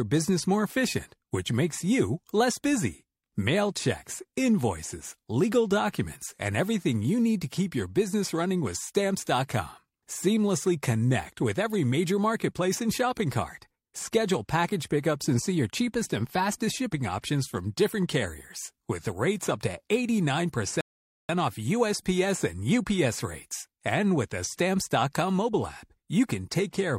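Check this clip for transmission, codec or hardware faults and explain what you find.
One fault stands out: a rebuffering stall. At 20.81 s the speech cuts to silence. It stays silent until 21.29 s, then carries on exactly where it broke off. The player had run out of downloaded audio and had to wait for more data to arrive. No sound is lost. Instead, about 0.48 s of dead air is inserted, so everything afterwards lands that much later than it should.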